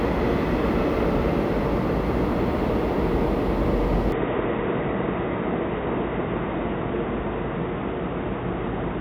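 Input switched to a poorer device, from 4.12 s to the end: the sound abruptly turns dull and boxy with nothing above 3.8 kHz, a new noise floor appears well below the signal, and level holds steady with no gap, likely because recording moved to a narrower-band microphone.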